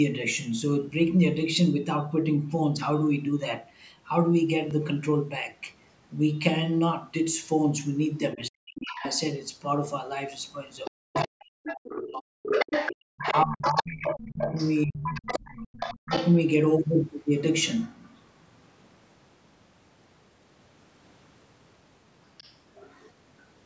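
A block of digital silence at 4.70 s lasts about 5 ms and is heard as a tick or dip. The output buffer was likely not filled in time, so the samples in that stretch became zeros. The sound drops to nothing and returns with no fade. A gap this short fits a 256-sample buffer that came up empty.

Speech suppressed in double talk first appears from 8.35 to 9.03 s. The talker's level falls by as much as 40 dB, for about half a second in total. Overlapping that window, from 8.76 to 9.22 s, the other side's voice leaks through, roughly 10 dB below the speech. Both people were likely talking at once, and the echo canceller could not tell the local voice from the loudspeaker echo, so it turned both down.

The same two faults return together for longer. The other side's voice leaks through from 10.85 to 16.37 s, only about 5 dB under the talker. It is likely the result of loudspeaker playback that the echo canceller did not fully remove. 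Over the same span the talker is suppressed in double talk from 10.91 to 12.52 s, with drops near 40 dB. It happens again from 13.11 to 16.11 s, with drops near 30 dB, for roughly two seconds.

A last faint scrap of the other side's voice leaks through from 22.37 to 22.55 s, around 30 dB below the speech.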